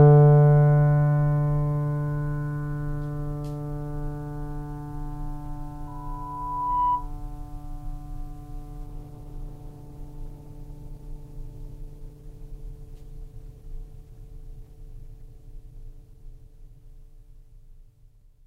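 Music with two faults. A loudspeaker feedback squeal runs from 5.87 to 7.11 s: a microphone is hearing the speaker it drives, and at 989 Hz the loop gain exceeds one, so a pure tone swells over about a second until it sits roughly 5 dB above the music. From 8.86 to 16.86 s the adaptive stream drops to a lower bitrate, which fits a switch from about 64 to 16 kbit/s Opus after the connection slowed. The quality changes abruptly and without any gap, leaving the codec artefacts more audible until the higher rate returns.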